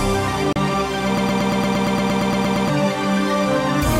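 At 0.53 to 0.56 s the sound drops to silence for about 32 ms, a digital broadcast dropout: the receiver muted after what fits a single lost or corrupted frame. From 1.18 to 2.69 s, a fragment of about 0.12 s repeats back to back thirteen times. This broken-record loop was likely caused by a stalled player or stream resending its last buffered piece, and the audio meant for that span is lost.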